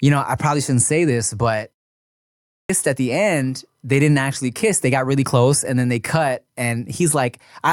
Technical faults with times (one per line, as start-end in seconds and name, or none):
2.27-2.69 clipped start after a pause